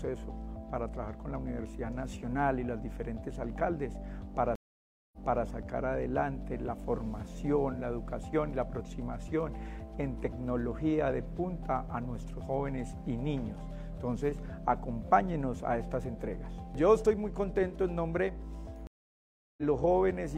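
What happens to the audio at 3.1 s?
Nothing goes wrong at 3.1 s; the audio plays through that moment intact, with no dropout, click or other fault to be heard.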